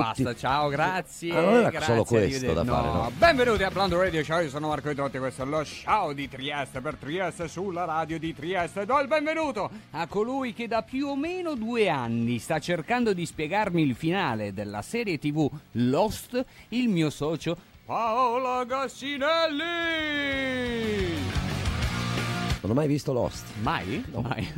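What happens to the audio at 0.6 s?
Nothing goes wrong at 0.6 s; the audio plays through that moment intact, with no dropout, click, distortion or other fault.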